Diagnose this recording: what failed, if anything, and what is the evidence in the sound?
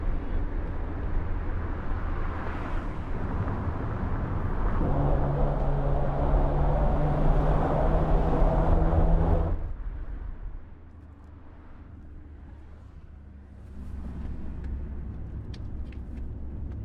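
A rapid ticking rides on the sound from 9.27 to 9.75 s as the level falls about 10 dB: zipper noise, unsmoothed gain applied in 1 dB steps, roughly forty per second.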